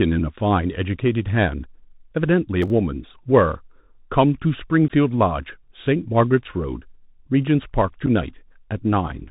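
The whole clip goes through a Bluetooth CVSD headset codec. One-bit delta coding with an adapting step cuts everything above 4 kHz, so a spectrogram shows an empty band there. Sibilants sound scratchy and a granular hiss sits under the speech, which fits a 64 kbit/s headset link.

From 2.62 to 2.70 s comes processor overload crackle. The system fell behind on audio buffers of around 10 ms, and roughly five were skipped. It is heard as a gritty tearing burst. The waveform shows abrupt jumps where segments are missing.

Unconcealed Bluetooth headset packet loss hits at 4.88 s, where 15 ms vanishes, and at 8.06 s, where 7.5 ms vanishes. This points to about two lost packets and then one. Each loss is a hard-edged hole, visible as a flat gap in the waveform and a thin vertical notch in the spectrogram.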